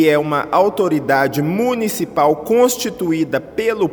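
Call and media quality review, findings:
No faults found on listening. Nothing audible calls for a ticket entry.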